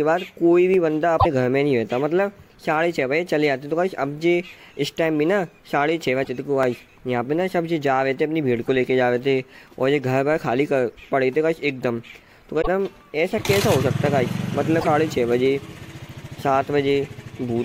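Dropped samples are the likely cause of the two sharp single clicks at 0.74 and 6.63 s: well under a millisecond of audio goes missing, so the waveform steps abruptly to a later value and leaves a thin vertical line across the spectrum without removing any audible sound. Damaged data in a compressed stream produces five brief glitches at 1.16–1.26, 6.21–6.29, 8.66–8.69, 12.58–12.68 and 14.77–14.87 s, each up to about a tenth of a second long, where corrupted frames were misread and the decoder lost sync before locking onto the next valid frame header.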